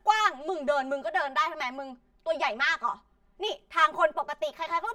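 From start to finish the speech sounds hollow and phasey, as if heard down a tube. This is channel delay (comb filtering): one channel trails the other by around 5 ms, and summing them cancels shared sound at evenly spaced notches starting near 100 Hz.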